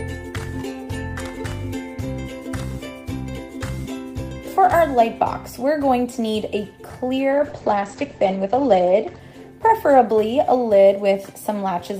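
A call bitrate drop runs from 7.32 to 10.25 s. The bit budget collapsed, consistent with a fall from 32 to 10 kbps, so coding coarsens and the top end narrows from 20 kHz to 8 kHz, leaving the sound rough and muffled, worst for 1.36 s.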